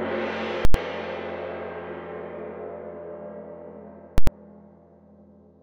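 Invalid numbers at full scale occur at 0.65–0.74 s and 4.18–4.27 s, with loud pops and silence between: invalid values pin the output for 93 ms, fitting a 4096-sample block.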